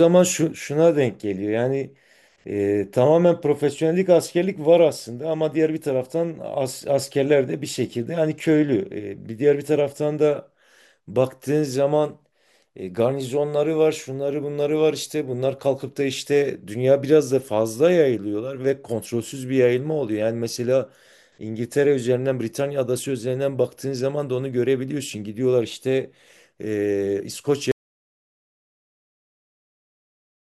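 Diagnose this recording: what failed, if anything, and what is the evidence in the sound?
Audio dropout to silence from 27.72 s to the end: the speech stops mid-flow and is replaced by silence, with no room tone or noise floor. That points to the input side, most likely a lost device connection or mute upstream, while the recorder kept writing empty samples.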